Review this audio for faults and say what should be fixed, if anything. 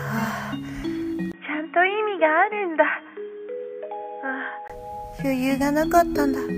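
From 1.32 s to 4.70 s the sound turns dull and a little quieter, with nothing above 3.6 kHz and a faint new noise floor, after a 20 ms gap at the switch. This is likely an input switched to a poorer device. A spectrogram shows the upper band empty across that stretch, and the waveform shrinks slightly. Fix the recording input to a single device so the system cannot swap it mid-take.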